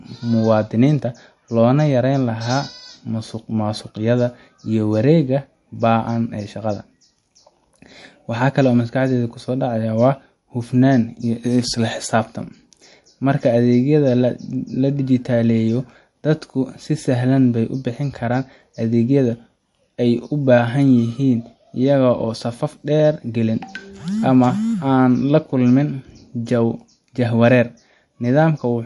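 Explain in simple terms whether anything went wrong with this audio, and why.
MP3 compression, from start to finish: the speech sounds watery and swirly, with nothing above about 11.3 kHz. This is likely an MP3 encoder short on data, which cut off the treble and let faint sound details flicker in and out.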